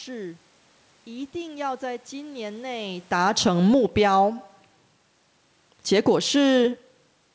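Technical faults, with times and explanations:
0.58 to 7.18 s, clock slip clicks: faint regular ticks roughly every half second, about fifteen, likely single samples slipping between two unsynchronised clocks about 40 ppm apart.
2.98 to 5.06 s, automatic gain falling: the gain control judged the input too loud, or its background noise too strong, and eased it down by about 4 dB, so the sound and its background sink together.
4.12 to 4.58 s, automatic gain rising: the gain control briefly judged the input too quiet and lifted it by about 7 dB, so the sound and background swell together.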